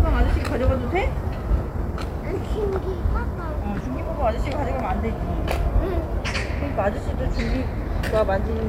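Listening closely to these everyday sounds, nothing stood out as a technical problem at any point.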